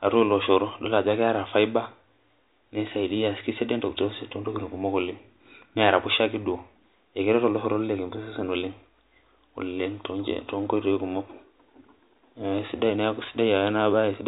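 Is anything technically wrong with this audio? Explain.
No, nothing is technically wrong with this audio.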